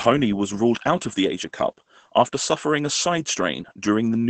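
From start to finish the speech sounds muffled and hoarse, with a slightly robotic edge and nothing audible above about 8.8 kHz. This is Opus voice compression at a rate that fits roughly 12 kbps: the SILK linear-prediction coder, running in wideband mode, keeps only the lower band and codes the excitation coarsely in 20 ms frames. The missing highs cause the dullness, and the coarse excitation causes the rasp.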